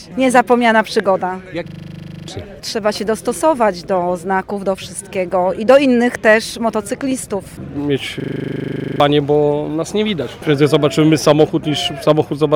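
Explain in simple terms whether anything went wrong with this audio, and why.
Yes, twice. From 1.68 to 2.28 seconds and again from 8.2 to 9.0 seconds, the sound turns into a rapid, rattling stutter that repeats 25 times a second. This is a system hang loop: the computer briefly froze, and the sound hardware kept replaying the last 40-millisecond scrap it held. Each time, well over half a second of real audio never reached the recording.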